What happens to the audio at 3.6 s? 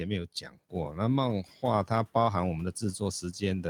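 Nothing goes wrong at 3.6 s: the audio is intact there, with the room's own background noise sitting about 28 dB below the speech as part of the recording.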